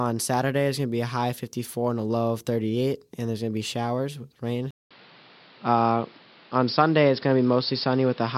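At 4.71 s the speech drops out for 200 ms, then returns band-limited with nothing above 5.4 kHz, a level shift of about 5 dB, and a new noise floor about 30 dB below it. The input likely switched to a poorer device, which stays in place until the end.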